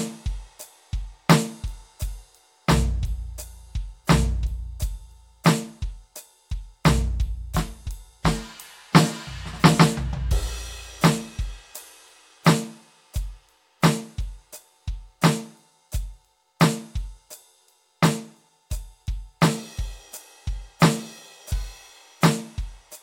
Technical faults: none

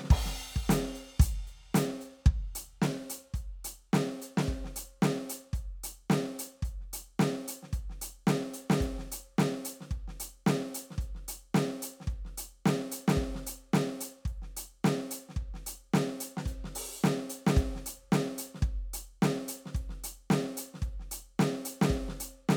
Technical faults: none

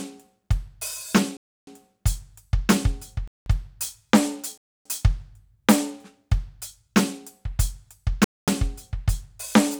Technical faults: block of digital silence

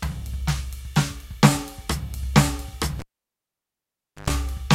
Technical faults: cable pulled and plugged in

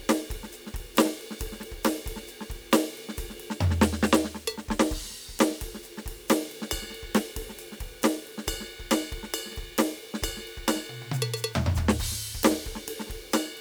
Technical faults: low bit depth without dither

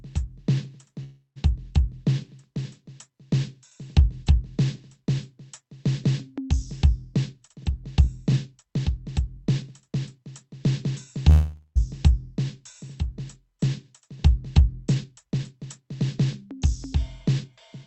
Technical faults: call audio freeze; jitter buffer speed-up

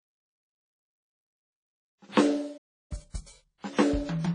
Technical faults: WMA compression; playback stall; time-compressed catch-up

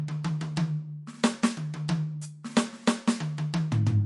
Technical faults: MP3 compression

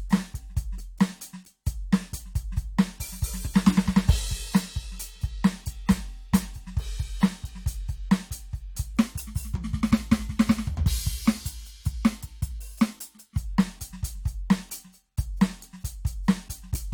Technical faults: section at the wrong speed

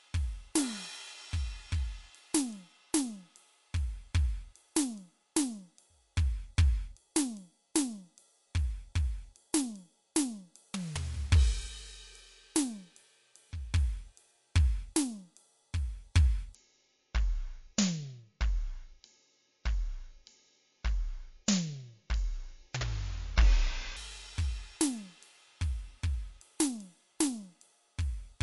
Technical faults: MP3 compression; section at the wrong speed

